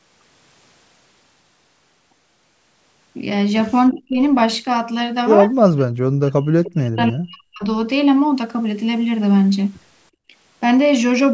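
From 3.91 to 4.21 s the speech dips by up to about 30 dB, most likely speech suppressed in double talk. The echo canceller, faced with both sides talking at once, pulls its own talker down too, leaving a hollow, sagging stretch. On the waveform the envelope pinches inward. On the spectrogram the harmonics fade toward the 8 kHz ceiling of the call band.

Within that dip, from 3.92 to 4.01 s, a faint echo leak appears. A copy of the voice delayed by 331 ms returns at about 25 dB below the speech, likely residue the loudspeaker side's canceller failed to remove. It sounds like a brief ghost, showing as a weak, time-shifted repeat of earlier harmonic patterns.

The same suppression returns more deeply, by about 40 dB, from 5.58 to 5.95 s and again from 6.15 to 7.64 s. The longer stretch holds the voice down for about 1.5 s.

From 10.11 to 10.33 s the background is gated by the echo canceller. 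The room tone drops by about 31 dB and then returns. This is heard as a sudden hole in the ambience and seen as a short blank band across the spectrogram's noise floor.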